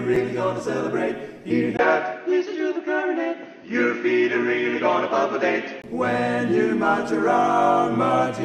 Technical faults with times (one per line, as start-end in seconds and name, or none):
1.77-5.84 input switched to a poorer device